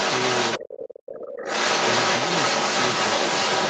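A second voice runs under this speech clip from the start to 0.96 s, somewhat louder than the talker, and returns from 1.17 s to the end at roughly twice that margin. This is the other side's voice leaking through, likely because loudspeaker playback reached the microphone and the echo canceller left it in. Between 0.6 and 1.45 s the talker's own speech sinks by as much as around 30 dB while the other voice is present. That is speech suppressed in double talk, with the canceller likely treating overlapping talk as echo and turning everything down. Throughout, the audio stops at 8 kHz, which fits an Opus call link running at about 24 kbps.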